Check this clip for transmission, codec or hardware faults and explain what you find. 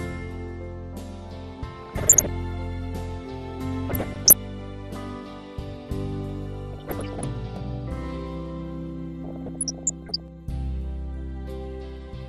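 Two things are going on here: a steady codec dullness across the whole clip, and four short bursts of transmission damage on top of it.

MP2 compression runs throughout. The top end is dull, and what's left has a gurgling, grainy edge. That's likely MPEG Layer II working with too few bits, which fits something around 80 kbps. It splits the sound into 32 sub-bands and shares bits among them. When it runs short, the upper bands drop out or flicker, and the rest are quantised coarsely, giving that low-rate digital radio texture.

DAB burbling hits at 1.83–2.29 s, 3.88–4.33 s, 6.73–7.25 s and 9.24–10.2 s. The last burst is the longest, about a second. Bit errors, somewhere around half a percent to one percent, are getting past error correction into the MP2 data. Corrupted samples put short blips of noise into single sub-bands, and corrupted scale factors make sub-bands jump in level for up to a frame. 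The burst lengths point to roughly 20 damaged frames each, and about 40 in the last one.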